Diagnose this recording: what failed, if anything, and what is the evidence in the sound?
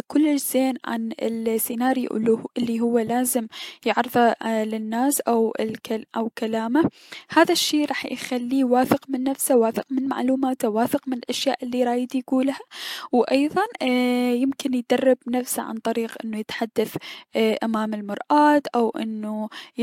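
Nothing stood out on listening to this speech recording that would point to a failure at any stage.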